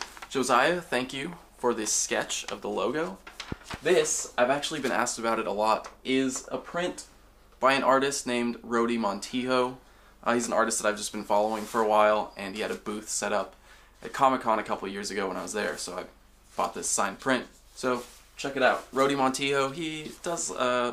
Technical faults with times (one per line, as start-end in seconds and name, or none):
3.52-3.76 loud pop